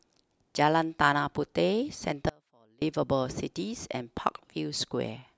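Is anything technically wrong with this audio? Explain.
Yes. From 2.29 to 2.82 s there is an audio dropout to a faint residue: the speech signal was likely lost upstream while the path after the break stayed live. For about half a second the speech cuts out abruptly, leaving only a faint leak roughly 35 dB down.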